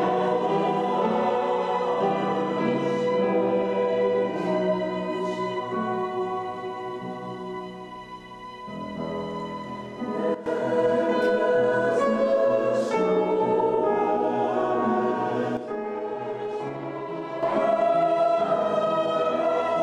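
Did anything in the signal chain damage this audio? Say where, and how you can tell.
Yes, there's a sudden gain jump, twice. At 10.35 s the level, background noise included, drops about 12 dB and snaps back at 10.46 s. From 15.57 to 17.43 s it falls about 8 dB. That's likely a digital gain setting applied instantly, with no ramp.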